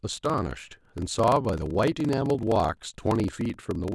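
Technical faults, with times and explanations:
Throughout: block size mismatch (padded). A short silent gap in every block produces a 23.4 Hz buzz, fitting 1024-sample reads, and speech runs at 0.938 speed with timbre unchanged.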